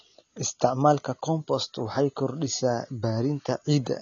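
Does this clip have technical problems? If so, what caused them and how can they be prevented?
Yes. The speech sounds dull and smeared throughout, with nothing above 7 kHz. This is AAC compression damage, likely from AAC-LC at a low bitrate around 24 kbps, which discards high bands and coarsely quantises the rest. Encode at a higher bitrate to prevent it.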